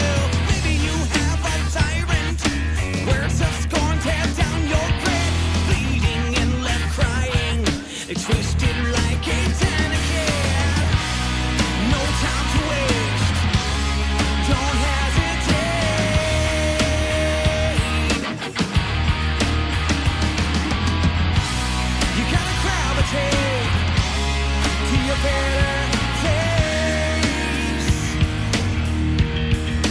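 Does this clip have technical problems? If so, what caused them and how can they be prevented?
No, no technical faults are audible.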